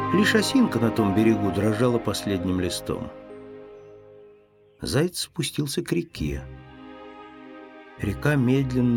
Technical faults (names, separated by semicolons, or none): none